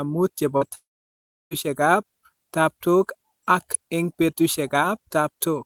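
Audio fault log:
0.57–0.63 s and 0.69–0.73 s, short concealed packet loss: Just after "muut che po", about 40 ms and then 20 ms of speech failed to reach the decoder in time. The receiver filled each gap by extending the preceding sound, reusing its pitch where voiced and shaped noise where not, then crossfaded back to real audio. The result is a brief smear or wobble in place of the original detail.
0.75–1.53 s, long network dropout: Still following "muut che po", roughly 760 ms of speech is missing, likely from a network dropout. Concealment first extends the last sound as a fading buzz or hiss, but it cannot sustain that for long, so most of the stretch, about 680 ms, is silence. Speech resumes at 1.53 s with the intervening material gone, so the sound jumps forward rather than continuing where it stopped.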